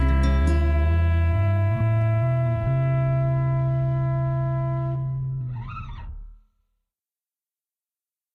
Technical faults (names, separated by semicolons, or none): none